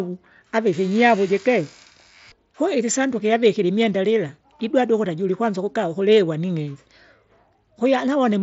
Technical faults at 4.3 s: concealed Bluetooth headset packet loss

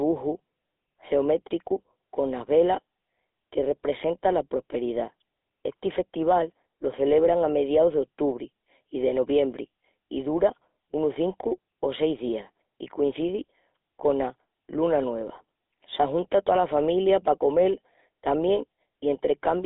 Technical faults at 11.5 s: GSM full-rate codec

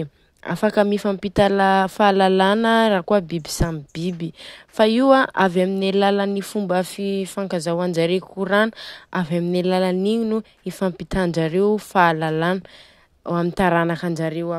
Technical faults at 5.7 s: none

